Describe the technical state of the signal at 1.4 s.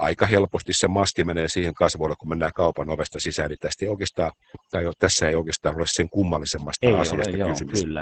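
At 1.4 s you're hearing overdone noise removal, which runs through the whole clip. The denoiser was pushed so hard that bands sitting near its noise estimate get pulled right down, taking the softer parts of the speech with them. The background is nearly silent apart from little twinkling specks.

Stacked on that is Opus voice compression, also present from start to finish. It's in its SILK speech mode at wideband, with nothing above about 8.7 kHz, and the damage is heavy. The coarse coding of the excitation suggests a very low bitrate, somewhere around 10 kbps, which leaves the voice muffled, a bit hoarse and faintly robotic.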